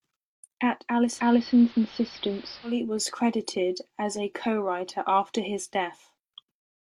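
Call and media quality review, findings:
Digital radio blending to analogue, 1.04–2.83 s: receiver lost digital, cross-faded over about 0.2 s to the AM broadcast and later back. Speech band-limited; level shift about 2 dB; hiss rises, roughly 25 dB below signal.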